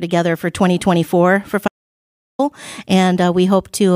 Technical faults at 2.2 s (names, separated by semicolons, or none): audio dropout to silence